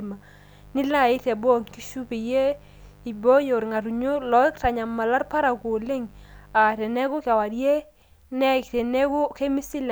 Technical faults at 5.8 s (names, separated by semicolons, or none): mains buzz